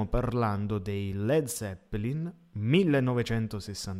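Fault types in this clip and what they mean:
No technical faults can be heard anywhere in this speech recording. Nothing in it stands out as a problem to listen for.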